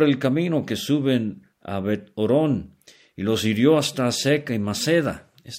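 Nothing in this speech recording gives any sign of a technical fault, so there's simply nothing to list here.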